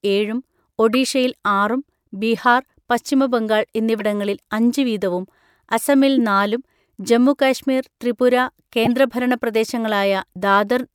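Speech with corrupt frame decoded events: brief glitches at 0.93–0.95 s, 2.35–2.48 s, 4.00 s just before "അഞ്ച് വീതവും അസമിൽ നാലും", and 8.85–8.87 s after "അസമിൽ നാലും ജമ്മുകാശ്മീർ ത്രിപുര". In each, the decoder played two to seven damaged frames, putting energy at the wrong frequencies. On a spectrogram this shows as short vertical smears, and on the waveform as abrupt spikes.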